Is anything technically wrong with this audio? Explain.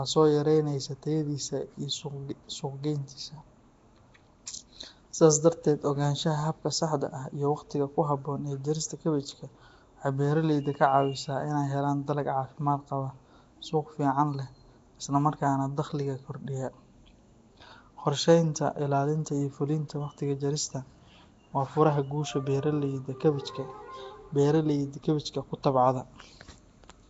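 Yes. Throughout the speech there is plainly audible Nellymoser compression, likely from Flash's Nellymoser Asao codec at a rate that fits 32 kbps. It spends very few bits per sample, so weak bands are replaced with noise, giving a rough, hissy halo and smeared, underwater tone. Nothing is present above 7.7 kHz. Unlike MP3 swirl, the damage is a steady noisy fizz rather than warbling tones.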